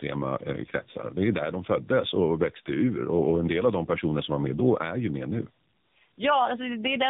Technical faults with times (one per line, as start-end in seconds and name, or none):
0.00-7.09 tandem speech coding